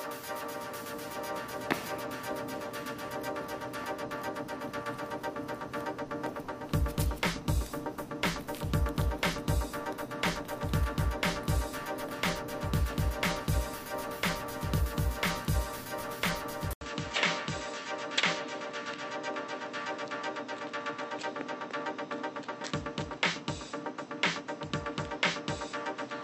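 At 16.73 s an 80 ms gap, a flat stretch on the waveform, gives way to audio with nothing above 7.9 kHz until the end, a hard ceiling on the spectrogram, plus new low background noise at unchanged level: the input likely switched to a poorer device.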